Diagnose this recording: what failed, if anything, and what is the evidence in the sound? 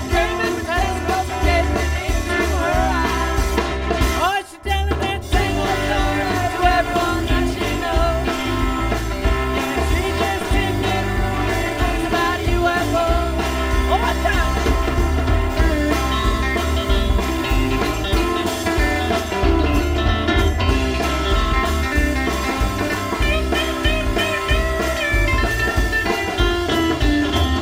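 Channel delay (comb filtering) runs through the whole recording, which points to the driver or buffer stage where the two channels are aligned before being summed to mono. One channel arrives about 3 ms behind the other, so content common to both cancels at regularly spaced frequencies, with the first notch near 150 Hz and further notches repeating up the spectrum. The result is a constant hollow, phasey colouration.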